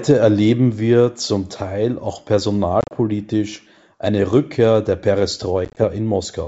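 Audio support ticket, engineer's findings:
Choppy, hard-edged dropouts with slightly distorted recovery at 2.81 to 2.92 s (80 ms lost over 100 ms, longest gap 30 ms) and 5.65 to 5.84 s (70 ms lost over 120 ms, longest gap 20 ms). Packet loss on an ADPCM call, pointing to about seven packets each, through the G.722 wideband path. Silence fills the gaps, and the decoder's predictor and step size drift from the sender's, so each resumption comes back slightly distorted before resettling within tens of milliseconds.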